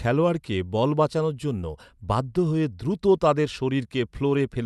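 Listening to this speech recording, nothing stood out as a technical problem.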